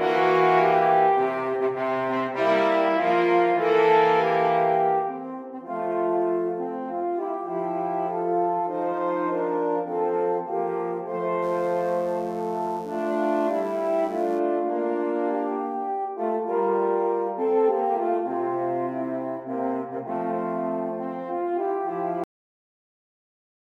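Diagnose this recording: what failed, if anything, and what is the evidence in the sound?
A steady, raspy mains buzz appears from 11.40 to 14.42 s, sitting roughly 30 dB below the signal. This is an analogue wiring fault: switching spikes twice per 50 Hz cycle, from a dimmer, rectifier or poor shielding, throw harmonics up into the kilohertz range.

At 22.24 s the sound stops mid-event and falls straight to digital silence with no decay. This is a cut-off end from the buffer or storage stage: the final buffers were never written or played out, so the audio simply ends.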